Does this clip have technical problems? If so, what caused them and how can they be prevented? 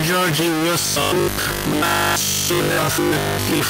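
Yes. A stuck bit runs through the whole clip: a distortion sits on the speech, and the pauses are filled with hiss instead of silence. One data bit is likely held at a fixed value by a broken line or converter, so about half the samples are shifted by that bit's weight. On a waveform, the quiet stretches show a steady, fuzzy floor. A spectrogram shows broadband noise smeared across all frequencies. Checking the converter wiring and running a bit-pattern test on the interface would prevent it.

From 0.8 s to the end, the speech also takes on a robotic sound from repeated short buffers. It becomes a rigid, metallic buzz at 50 Hz that still roughly tracks the syllables. The likely cause is new audio arriving too seldom, so the software replays the last stretch, which fits a 20 ms buffer. Most of the signal in that span is repetition, and the real audio is skipped. A waveform shows identical 20 ms cycles tiling the signal. 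A spectrogram shows evenly spaced harmonic lines at multiples of 50 Hz. Larger buffers or a more reliable delivery path would prevent it.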